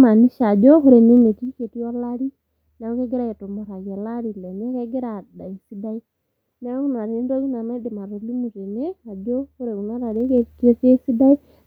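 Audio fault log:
1.15–1.73 s and 10.01–10.55 s, zipper noise: after "ore ene" the level drops by about 15 dB, and after "tene ajo ore kuna" it rises by about 15 dB. Each move is made in unsmoothed 1 dB steps at about 20 per second, so every step clicks, giving a fast ticking over the sound.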